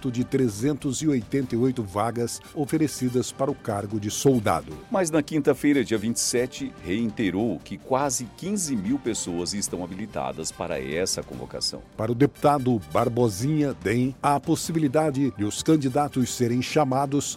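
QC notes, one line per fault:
No faults detected.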